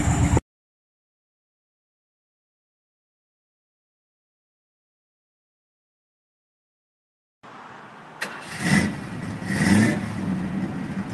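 The clip is audio carried over a WebRTC call link with no technical faults, so there are no times or causes to report.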